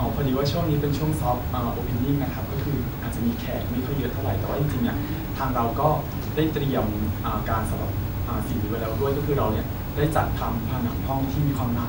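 Throughout the speech, a steady 50 Hz buzz with gritty hash above it sits roughly 15 dB down, topped by a thin 15.6 kHz whine. This is video or display buzz: a screen or video cable leaking its field and line scanning into the audio.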